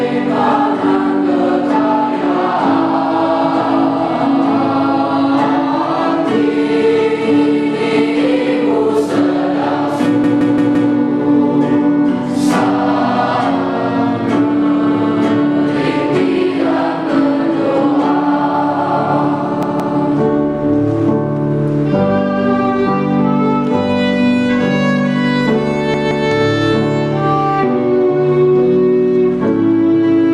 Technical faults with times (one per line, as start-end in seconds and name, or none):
10.24-10.92 repeated buffer
19.63-19.97 repeated buffer
25.94-26.28 repeated buffer